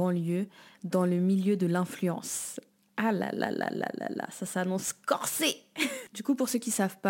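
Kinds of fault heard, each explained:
Sample clock jitter: converter clock timing wanders by roughly five microseconds, adding hiss about 25 dB down. Spectrograms show broadband haze on loud, bright speech, none in pauses.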